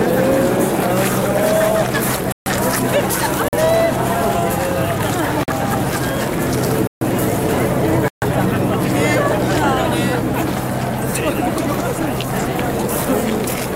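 The output buffer was most likely not filled in time, so whole blocks of samples went to zero, producing five blocks of digital silence. The sound drops out abruptly: short holes of about 46 ms at 3.48–3.53 s and 5.43–5.48 s, which fits a 2048-sample buffer, and longer gaps of about 139 ms, roughly three such blocks, at 2.32–2.46 s, 6.87–7.01 s and 8.08–8.22 s.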